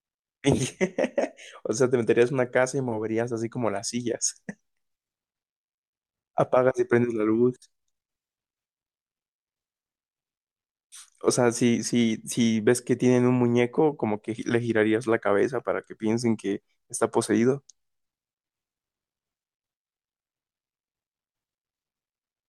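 A speech recording with nothing technically wrong with it.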